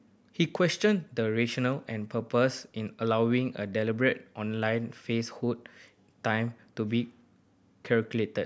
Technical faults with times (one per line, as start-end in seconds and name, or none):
none